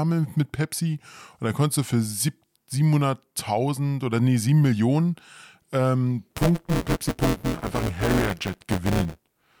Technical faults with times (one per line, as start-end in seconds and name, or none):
6.30-9.60 buffer tearing